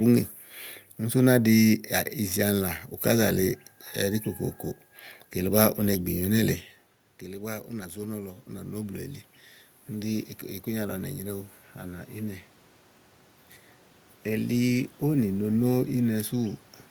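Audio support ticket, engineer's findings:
Automatic gain rising, 7.69–9.1 s (about +5 dB) and 9.88–12.49 s (about +4 dB). Follows the talker moving away near 6.5 s, input down about 14 dB. AGC ramps up slowly. Room noise swells with the voice, unlike a talker-distance change alone.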